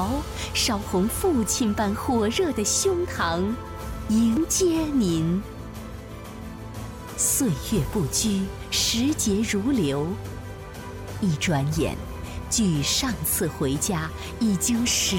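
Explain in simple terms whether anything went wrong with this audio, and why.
At about 4.37 to 4.40 seconds there is a brief glitch: a short chirp or blip lasting roughly 30 milliseconds. This is damaged data in a compressed stream. A small stretch of the stored audio data was corrupted, so the player could not decode it properly. It briefly lost its place, produced a burst of garbled sound, then locked back on at the next intact chunk and carried on.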